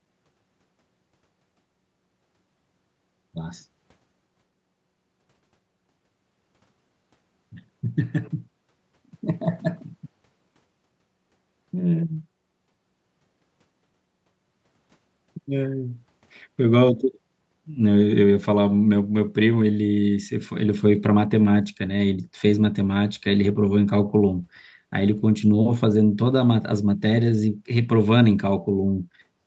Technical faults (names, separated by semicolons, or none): none